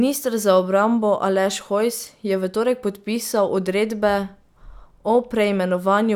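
Nothing stood out as a technical problem on listening to this speech recording.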